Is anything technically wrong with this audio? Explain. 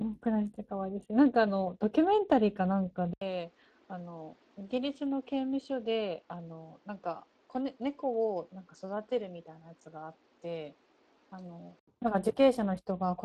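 Yes, two problems. The whole speech clip carries plainly audible Speex codec damage: the CELP coder is short on excitation bits, leaving the voice hoarse and grainy, which fits a setting around 22 kbps.

From 3.13 to 11.88 s, the sound likely reflects the input switching to a poorer device. After an 80 ms gap, it drops about 10 dB, loses everything above 8.5 kHz, and picks up new background noise roughly 30 dB down.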